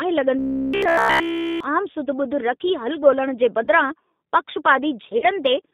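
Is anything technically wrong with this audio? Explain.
Yes, several things. The whole clip carries G.729 codec damage: speech sits in a narrow 200 Hz to 3.7 kHz line band and sounds rough and synthetic, which fits 8 kbit/s G.729A.

From 0.39 to 1.63 s there's robotic sound from repeated short buffers. All of it is a rigid metallic buzz at 66.7 Hz, likely from a 15 ms chunk looping while the real audio is skipped.

There's VoIP packet loss concealed by the speech codec at 2.05 to 2.08 s (20 ms lost), 3.64 to 3.68 s and 5.18 to 5.27 s (40 ms each). The decoder stretches the last pitch into a fading buzzy smear, which points to one and then two dropped packets.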